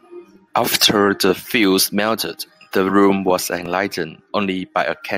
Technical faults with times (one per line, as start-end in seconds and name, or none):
none